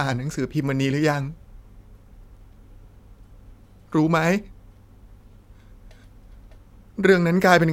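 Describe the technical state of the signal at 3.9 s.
The speech at 3.9 s is intact, with no audible fault at that moment.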